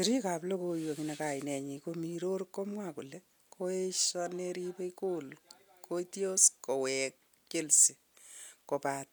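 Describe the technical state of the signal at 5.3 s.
At 5.3 s the speech signal is intact, with no audible fault at that moment.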